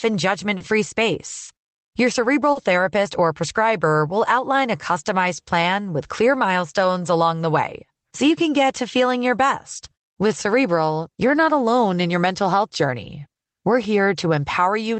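Clock drift between sender and receiver runs through the whole clip: the sender's clock is around 4 percent slower than the receiver's, so the jitter buffer keeps draining and playback has to be padded out, producing small, unevenly spaced timing hiccups in the speech.

Short stalls from a late packet occur at 0.57 s, 1.44 s and 2.52 s. Each time the buffer ran dry, the receiver held the last sound for about 30 ms, 40 ms and 30 ms respectively, then resumed where it left off. Nothing is lost, but each moment sounds briefly frozen, with a slight buzz or dip.

Repeated timing corrections follow from 3.20 s to 14.70 s. Playback runs at 96 percent speed, with short pieces repeated to stretch the audio by roughly 400 ms in total. The edits are small and irregularly spaced. Over the call path, which sounds like Opus, the audio is limited to about 8 kHz.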